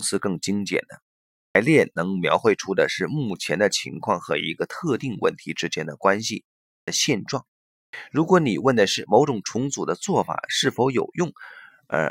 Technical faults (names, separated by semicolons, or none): clipped start after a pause